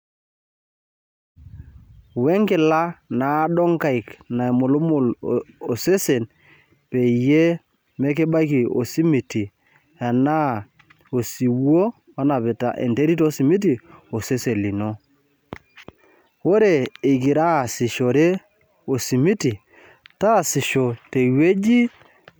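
No technical faults are audible.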